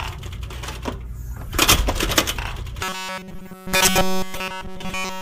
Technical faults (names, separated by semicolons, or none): robotic sound from repeated short buffers